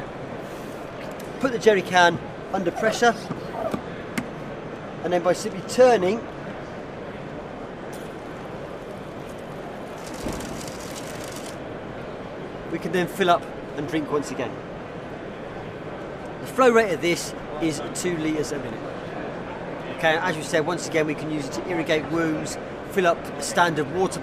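No technical faults are audible.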